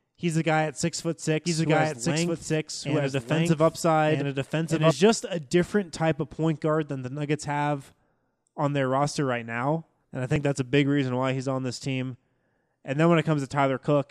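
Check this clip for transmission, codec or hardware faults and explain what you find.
One fault is present. From 1.45 to 4.91 s, after "guy at six foot" and before "just a different type", a doubled audio track plays. An equally loud, dry, full-band copy trails by about a second and a half, likely from a slower second capture path. On a spectrogram it shows as duplicated patterns offset in time, with abrupt start and stop edges.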